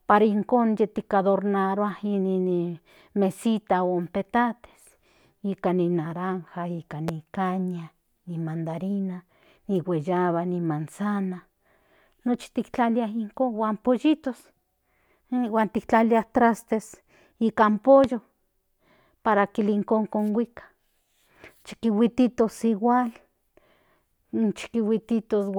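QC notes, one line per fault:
7.08–7.11 s and 18.04–18.07 s, loud pop: two single sharp pops ride over the speech, which continues underneath. The first peaks roughly 10 dB above the surrounding signal, the second roughly 15 dB. Each sounds like a brief electrical step or pulse, likely from a plug, switch, static discharge or driver glitch, shaped by the downstream circuitry. The waveform shows a tall narrow spike. The spectrogram shows a thin full-band vertical stripe at each time.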